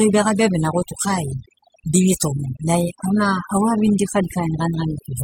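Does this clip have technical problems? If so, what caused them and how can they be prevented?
Yes. Overdone noise removal runs throughout the speech. A noise reduction stage was pushed too hard, so any frequency band sitting close to its estimate of the background noise gets cut deeply or switched off entirely, and the softer parts of the voice are treated as noise and removed too. The gaps between phrases fall to near silence scattered with twinkling specks. To prevent it, apply gentler reduction and reduce noise at the source instead.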